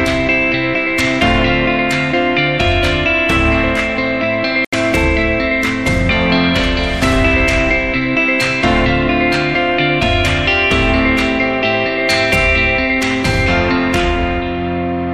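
At 4.65 s the sound drops to silence for about 79 ms before returning at 4.74 s, likely a Bluetooth stall as the receiver's buffer ran empty.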